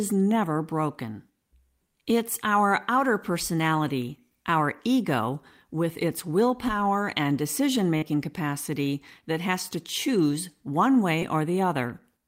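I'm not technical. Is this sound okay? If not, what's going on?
No. There is short concealed packet loss twice, at 7.97 to 8.12 s and at 11.19 to 11.23 s. Tiny bits of the speech, 40 ms and then 20 ms, arrived too late. The receiver filled each gap by stretching the last sound, so you hear a brief smear.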